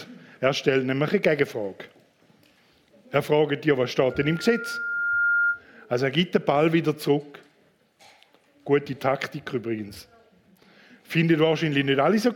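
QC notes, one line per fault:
4.10–5.62 s, loudspeaker feedback squeal: a pure tone near 1.4 kHz swells over about a second until it is roughly as loud as the sound itself, then stops. The microphone is re-picking its own loudspeaker, and at that frequency the loop gain exceeds one.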